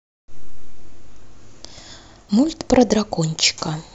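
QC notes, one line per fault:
2.29 s, damaged data in a compressed stream: a brief blip cuts into the speech for about 4 ms. A stretch of the coded stream there is corrupt, so the decoder misreads the frame, loses sync and resumes at the next valid frame header, yielding a short burst of garbage instead of the intended sound. On a spectrogram it appears as a thin vertical smear of broadband energy; the waveform shows a tiny discontinuity or spiky glitch.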